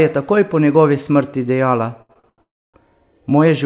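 From 2.02 to 2.40 s there's a run of repeated stalls, a stutter: the jitter buffer keeps running dry, so four times the last sound gets stretched, the longest hold about 82 ms. That's 218 ms of filler, over half the span, so it drags and hiccups without losing anything.

Right after, at 2.42 s, comes a call audio freeze lasting until 2.76 s. A brief carry-over of the last sound fades into about 280 ms of silence before the sound resumes where it stopped. It's likely packets held up on the way, leaving a 317 ms gap. Throughout, nothing reaches above 4 kHz, which fits a G.711 mu-law call path at 64 kbps.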